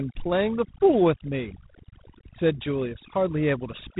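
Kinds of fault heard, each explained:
Overdone noise removal: A noise reducer was pushed too hard here. It clamps down any frequency band that sits close to what it thinks the noise floor is, and the softer parts of the speech get swallowed along with the hiss. You can hear it throughout: the background drops away and breaks up into little twinkling specks.
G.726 ADPCM: This is the telephone-band codec that sends each sample as a small difference from a running prediction, so fewer bits mean more quantisation noise. The damage is plainly audible all the way through: a harsh, rasping hiss rides along with the speech and rises and falls with its level, which fits the 24 kbit/s mode. The band also stops dead at about 3.8 kHz, so the top end is simply gone.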